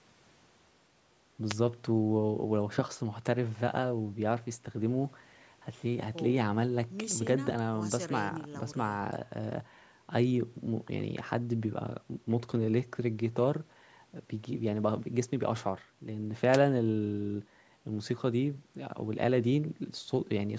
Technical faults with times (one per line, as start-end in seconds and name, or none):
1.47-1.56 wireless microphone noise hit
16.51-16.59 wireless microphone noise hit